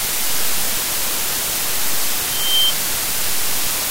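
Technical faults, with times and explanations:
2.25 to 2.74 s, loudspeaker feedback squeal: a 3.1 kHz tone swells over roughly a third of a second to about 5 dB above the audio, because mic and speaker formed a loop.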